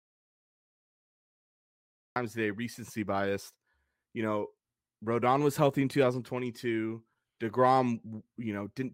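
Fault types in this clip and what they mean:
Audio dropout to silence: the clip opens in silence, with no room tone at all, and the speech cuts in abruptly at 2.16 s on "today recency biased". The input was likely lost, so silence was written. A natural pause would keep background noise.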